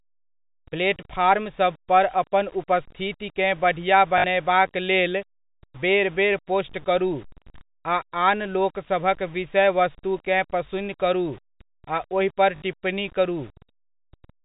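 Across the whole speech clip, grainy distortion sits about 30 dB below the signal and tracks its level, likely low bit depth without dither near 7 bits; the waveform shows visible staircase steps in quiet passages.

At 4.18 to 4.24 s and again at 12.56 to 12.62 s, packet loss with last packet repeated produces a 60 ms robotic stutter, consistent with three 20 ms packets replayed. The spectrogram shows 50 Hz buzz striations.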